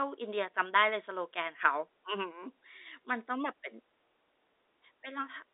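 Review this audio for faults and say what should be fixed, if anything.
Nothing here needs fixing: this is ordinary speech over a G.711 telephone line, which keeps it within the usual narrow phone band with nothing above 3.8 kHz.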